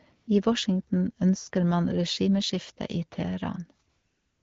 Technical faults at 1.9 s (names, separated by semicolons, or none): none